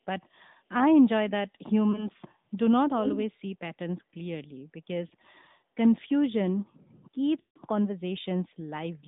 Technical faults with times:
0.00-9.07 AMR narrowband mobile codec
1.92-2.08 lost AMR speech frames
3.04-3.20 echo leak
5.08-5.12 lost AMR speech frames
7.40-7.58 lost AMR speech frames

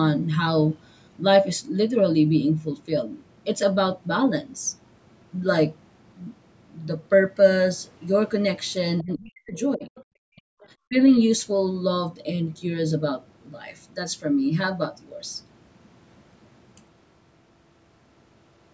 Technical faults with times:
9.01-9.89 speech suppressed in double talk
9.96-10.03 other side's voice leaking through
10.28-10.61 speech suppressed in double talk
10.87-10.96 speech suppressed in double talk

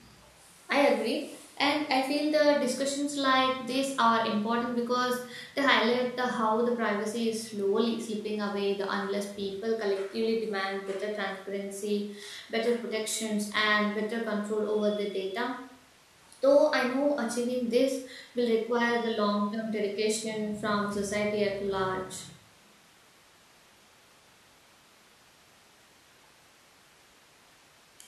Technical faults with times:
none

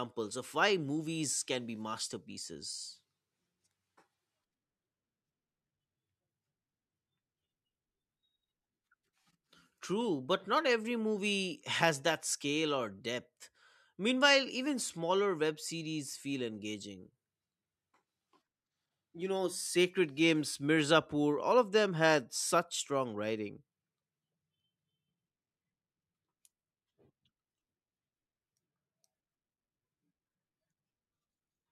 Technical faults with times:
none

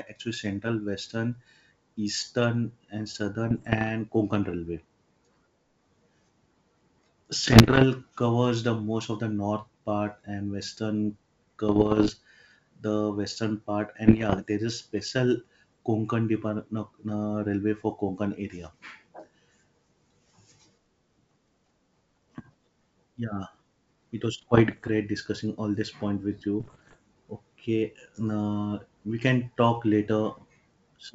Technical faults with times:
3.50-3.90 bit errors on an ADPCM link
7.44-7.84 bit errors on an ADPCM link
11.68-12.11 bit errors on an ADPCM link
14.06-14.48 bit errors on an ADPCM link
24.38-24.89 bit errors on an ADPCM link
26.60-26.96 bit errors on an ADPCM link

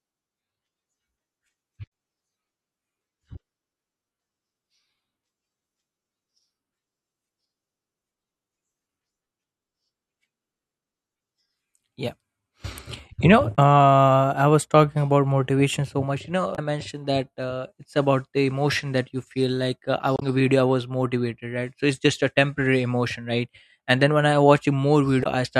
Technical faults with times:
1.84-1.89 damaged data in a compressed stream
13.53-13.59 damaged data in a compressed stream
16.52-16.59 damaged data in a compressed stream
20.15-20.23 damaged data in a compressed stream
25.20-25.27 damaged data in a compressed stream

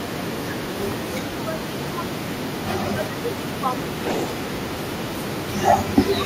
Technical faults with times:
0.00-0.56 speech suppressed in double talk
0.00-5.98 echo leak
1.06-2.38 speech suppressed in double talk
2.94-5.27 speech suppressed in double talk
6.13-6.26 speech suppressed in double talk

